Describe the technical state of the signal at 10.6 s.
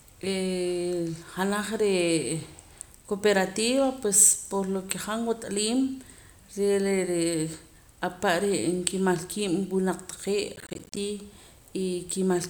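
At 10.6 s there's processor overload crackle, running 10.56 to 10.97 s: roughly 10 ms buffers keep missing their deadlines and drop to silence, giving a gritty, tearing burst.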